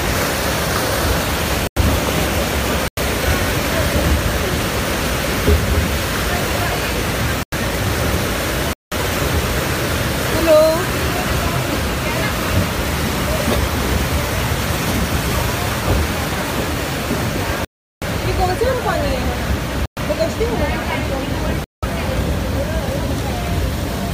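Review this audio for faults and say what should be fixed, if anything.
Blocks of digital silence cut in at 1.67, 2.88, 7.43, 8.73, 17.65, 19.86 and 21.64 s, each 93 to 372 ms long. Most of the lengths fit whole 4096-sample buffers left unfilled. The waveform drops abruptly to near-silence, and the spectrogram shows dark gaps. A larger output buffer or higher audio-thread priority would prevent this.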